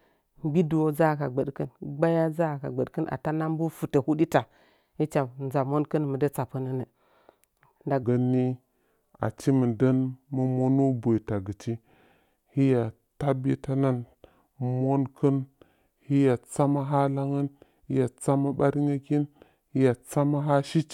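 A section at the wrong speed runs from 8.03 s to the end of the clip. From that moment the speech plays at 0.81 times its recorded speed, so it drags noticeably and every voice drops by roughly four semitones, sounding deeper and heavier. The shift is abrupt rather than gradual, which likely points to this stretch being played or resampled against the wrong clock, with speed and pitch falling together.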